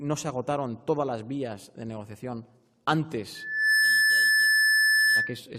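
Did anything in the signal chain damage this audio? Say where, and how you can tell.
Yes: loudspeaker feedback squeal. From 3.35 to 5.39 s, the microphone recirculated the loudspeaker output until a 1.7 kHz tone swelled within half a second to roughly 10 dB over the sound.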